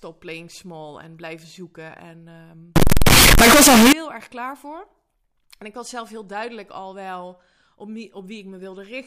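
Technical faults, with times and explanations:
2.76 to 3.93 s, float read as integer: floating-point samples were likely read as integers, so sound turns into a harsh, near-square blast at an almost fixed, high level, with background noise as loud as speech, ending just before "erg klaar voor".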